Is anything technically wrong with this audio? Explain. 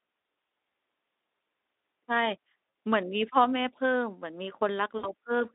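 Yes. VoIP packet loss concealed by the speech codec occurs twice: from 2.69 to 2.73 s, a 40 ms gap that fits two lost 20 ms frames, and from 4.97 to 5.10 s, where about 60 ms went missing. At each point the Speex decoder, running on a narrow 250 Hz to 3.7 kHz line, keeps synthesising from its last pitch and filter state while lowering the gain. The speech smears into a fading buzzy tone or coloured noise and stays thin briefly after the stream resumes.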